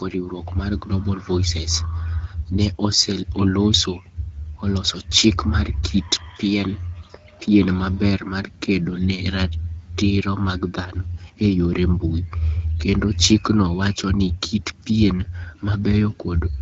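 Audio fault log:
Nothing stood out on listening to this speech recording.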